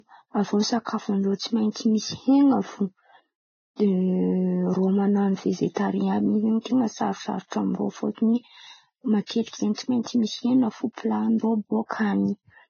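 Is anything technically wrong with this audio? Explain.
Yes. Low-bitrate audio saved at a high bitrate, throughout: the speech has nothing above 6.6 kHz, likely from a very low-bitrate encoding re-saved as MP3, which cannot restore what was lost.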